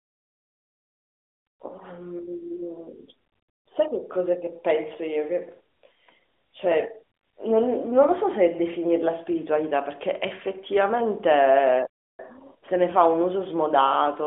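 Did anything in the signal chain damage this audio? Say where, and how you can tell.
Yes. At 11.87 s the speech cuts abruptly to silence for about 0.32 s, then picks up again at 12.19 s. That gap is a playback stall at the playback stage, likely the player's buffer running dry or its thread being blocked until output could restart.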